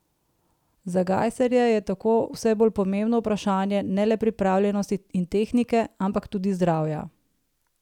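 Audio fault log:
No faults detected.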